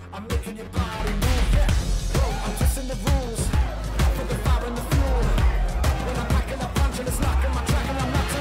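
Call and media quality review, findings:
Channel delay (comb filtering), 0.0 to 1.0 s. Hollow, phasey sound. One channel arrives around 10 ms late before a mono sum. Shared content cancels at fixed notches, the first near 50 Hz, then roughly every 100 Hz. Probable component: stereo-to-mono mixdown.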